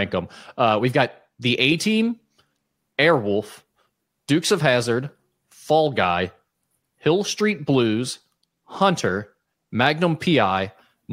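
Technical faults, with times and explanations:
0.30–11.04 s, clock slip clicks: faint ticks recur roughly every 0.4 s, around 30 in all. Likely two unsynchronised clocks drifting about 50 ppm apart, each slip dropping or repeating one sample.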